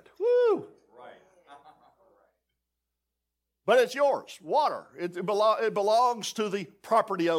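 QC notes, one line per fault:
No technical faults are audible in the speech, and the signal stays continuous and stable throughout.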